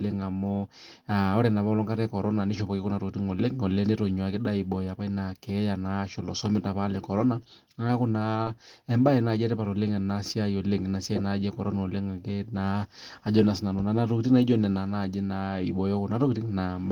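At 8.43 to 8.48 s, short concealed packet loss occurs. About 20 ms of speech arrived too late. The decoder bridged roughly 27 ms, leaving a brief smear.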